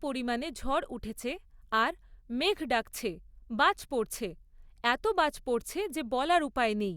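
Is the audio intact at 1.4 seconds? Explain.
Yes, the audio is intact at 1.4 seconds, with no dropout, click, distortion or other fault at that moment.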